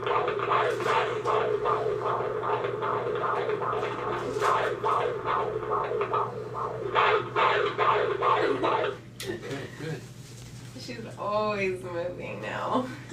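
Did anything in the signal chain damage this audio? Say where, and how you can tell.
No, nothing in the signal chain left an audible mark on this audio. None of the stages shows any damage I can point to in the sound.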